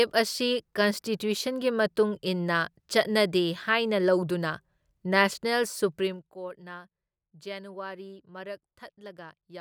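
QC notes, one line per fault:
5.96–6.32 s zipper noise: the level drops by about 15 dB in coarse 1 dB steps, around fifty per second, each step clicking audibly into a ticking buzz.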